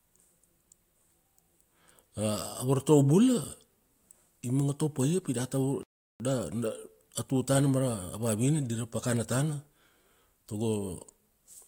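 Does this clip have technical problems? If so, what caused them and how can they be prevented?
Yes: a playback stall from 5.83 to 6.2 s cuts the speech to silence for about 0.37 s, likely because the player's buffer ran dry or its thread was blocked. A larger playback buffer and keeping the audio thread free of blocking work would prevent it.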